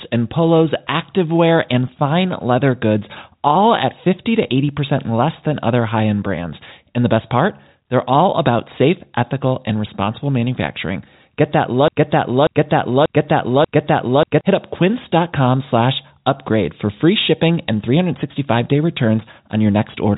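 From 11.88 to 14.41 s, a broken-record loop: one 0.59 s fragment repeats four times, likely from a stalled stream, appearing as identical tiled blocks on waveform and spectrogram.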